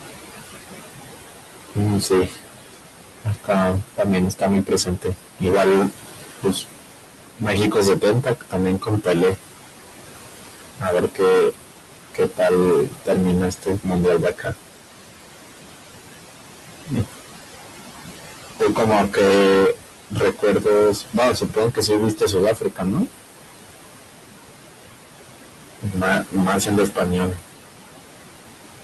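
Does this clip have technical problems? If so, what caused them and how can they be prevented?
Yes, there are three. First, hard clipping runs through the whole clip. The speech is pushed roughly 26 dB past what some stage in the chain can carry, so around a fifth of the waveform gets sliced flat at the ceiling. Those squared-off peaks throw harmonics way up the spectrum, which is why every louder syllable comes out as a harsh fuzz rather than just the odd crackle. To prevent it, pull the input gain down at the first stage so peaks sit well under full scale.

Second, there are noise suppressor artifacts throughout. The room noise sits only about 10 dB under the speech, and the suppressor is dragging it down by about 17 dB in whatever bands it decides are steady noise, frame by frame. So the background drops away in the gaps and swells back under the speech. To prevent it, dial back the suppression strength, or better, cut the room noise at the source so the suppressor has less to fight.

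Third, there's speech cut by the noise suppressor at seven spots: 1.75–6.78 s, 7.37–9.38 s, 10.8–11.55 s, 12.14–14.55 s, 18.6–19.17 s, 20.1–23.09 s and 25.79–27.42 s. In each stretch the suppressor mistook bits of speech for noise and ducked them along with the background. The drops go as deep as about 10 to 19 dB, and quiet consonants and word tails come out swallowed or faint. To prevent it, run gentler suppression with a slower, more speech-aware gate, and get the speech further above the noise.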